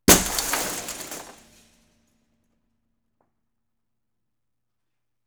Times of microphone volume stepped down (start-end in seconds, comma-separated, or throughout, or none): none